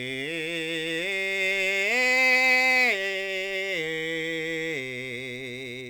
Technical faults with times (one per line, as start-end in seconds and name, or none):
0.00-5.90 sample clock jitter